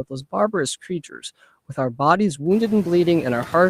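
From 0.33 s to 2.39 s a call bitrate drop pulls the encoder from 64 kbps down to 28 kbps, holding the lowest rate for about 1.25 s. The coarser coding degrades the speech until the rate recovers. Background room noise rises around 2.5 s.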